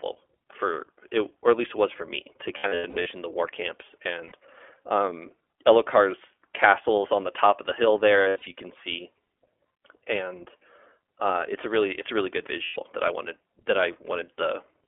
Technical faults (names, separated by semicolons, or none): iLBC codec; lost iLBC frames